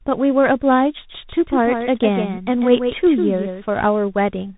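Throughout the speech, the sound is rough and noisy, with nothing above 3.8 kHz. This is tandem speech coding. The signal was decoded and re-encoded in sequence, fitting a G.726, G.711 A-law and CVSD chain, so each stage compounded the previous damage.

From 1.09 to 3.69 s, a second full-band copy of the speech trails the original by roughly 150 ms, about 5 dB quieter. It has no reverberant tail and switches on and off abruptly. This is a doubled audio track, likely from the same signal being captured twice along paths of different latency.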